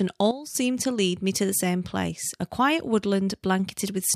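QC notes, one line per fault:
0.31–0.55 s, sudden gain jump: speech and background noise drop together by about 12 dB in one step, then recover just before "to lead me to", likely from an unramped gain change. The waveform shows a flat-edged notch, the spectrogram a uniform darkening.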